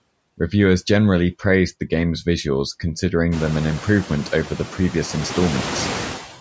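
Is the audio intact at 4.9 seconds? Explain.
No. Noise suppressor artifacts run through the whole clip, including 4.9 s. It lowers steady noise band by band, by about 10 dB, so the room noise, louder since roughly 3.5 s, sinks between phrases and swells beneath speech, rather than a gate's abrupt cut to silence.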